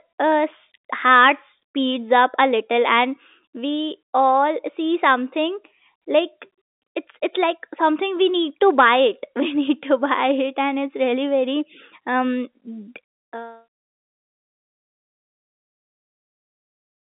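Nothing stood out as a fault on listening to this speech.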